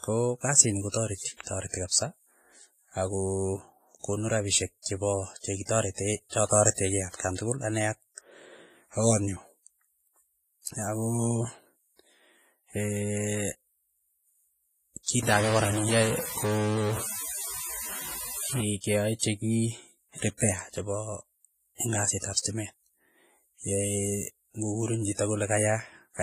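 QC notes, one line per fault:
Throughout: WMA compression. The speech carries heavy codec damage, with ringing, washy smearing and a hiss that rises and falls with the voice. Nothing remains above 15 kHz. This likely comes from a transform codec at a low bitrate, which fits about 24 kbps.
15.23 to 18.61 s: stuck bit. Distortion appears across this span, and the pauses fill with noise instead of falling quiet. One data bit likely stays fixed at a single value, so about half the samples are offset by that bit's weight.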